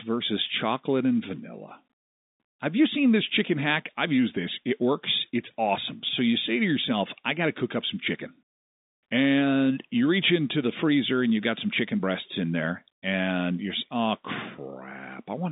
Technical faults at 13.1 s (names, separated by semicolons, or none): none